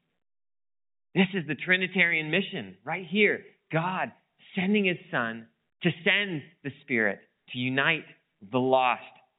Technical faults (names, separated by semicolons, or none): none